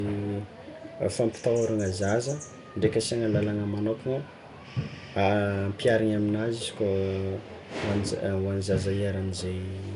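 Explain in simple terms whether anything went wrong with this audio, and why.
Throughout, the speech has a rough hissy halo and a smeared, underwater sound, with nothing above 10.6 kHz. That is likely Nellymoser compression. Plain muffling would lack the hiss.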